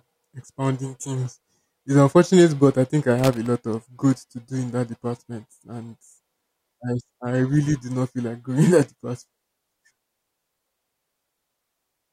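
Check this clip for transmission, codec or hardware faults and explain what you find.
One hardware fault is audible. Loose connector crackle runs from 3.19 to 3.46 s, about 0.28 s. A worn or dirty contact briefly makes and breaks. The speech is chopped, and any DC on the line adds pops. It sounds like an irregular burst of scratchy crackle.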